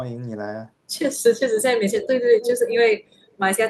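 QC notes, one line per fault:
1.93–2.07 s, 2.37–2.51 s and 3.27–3.34 s, echo leak: a delayed copy of the speech trails it by 181 ms, well below the speech at first, then nearly as loud, then barely audible. The likely cause is a far-end loudspeaker whose echo canceller let its microphone's pickup return.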